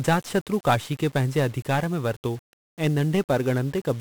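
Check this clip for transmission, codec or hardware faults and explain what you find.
One fault runs through the whole speech clip: 1-bit DFPWM compression. It is present from start to finish. The codec keeps a single bit per sample. Each bit only says whether an internal level should rise or fall, and that level adapts as it tracks the waveform. So the signal is approximated, never captured exactly. The damage here is heavy. Strong broadband quantisation noise sits under everything. The speech sounds fuzzy and crackly, and its treble is buried in hiss.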